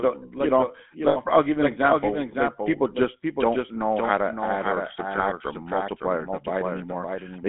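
The whole clip carries a doubled audio track: a second full-band copy of the speech runs about half a second behind at roughly 5 dB down, with no room colour. It's likely a second capture path or a misaligned edit.

Over that is the GSM full-rate codec. The line is squeezed to roughly 200 Hz to 3.6 kHz, which fits the 13 kbps GSM coder, and the voice takes on that buzzy, gravelly roughness from the coarse pulse excitation.

Then there are lost GSM frames. From 1.08 to 1.17 s, right after "like the you know" and before "I'll give you an", about 80 ms (which fits four frames) freezes into a rough metallic ring. A shorter 20 ms one hits at 5.16 s, after "how to add or".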